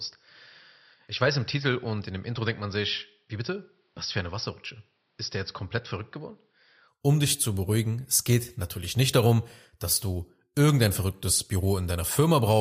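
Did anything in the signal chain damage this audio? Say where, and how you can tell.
Yes. From the start to 6.88 s the speech sounds dull and boxy, with nothing above 5.7 kHz, a level roughly 5 dB lower, and faint background noise about 45 dB below the signal. At 6.88 s it opens up abruptly with no gap. This points to the driver and device-selection stage: the input likely switched to a poorer device, a narrower-band device with its own noise floor, before the better one took over.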